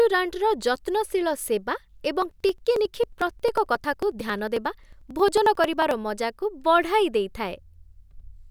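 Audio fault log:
2.22–5.91 s, periodic USB or driver dropouts: right after "ଯତ୍ନଶୀଳ ସେବା", the speech breaks into a steady ticking, about forty small jumps every 0.09 s. Each time, roughly 10 ms of audio is skipped outright rather than replaced by silence, so the waveform splices forward and clicks. Because the spacing never varies, this points to a blocked bus or driver on a fixed schedule, not random network packet loss, which would land at irregular times.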